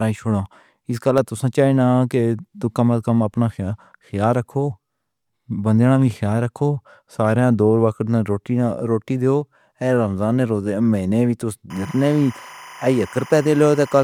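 At 1.18 s and again at 9.41 s a single sharp click cuts through the speech. These are likely dropped samples: a sliver of well under a millisecond vanishes, so the waveform jumps. Unlike a dropout, no sound goes missing. From 11.70 s, just after "نے روزے مہینے وی", timecode bleed sets in until the end: a chirping warble about 20 dB below the speech, toggling near 1 and 2 kHz at a steady 25-frame rhythm, unlike a smooth hum.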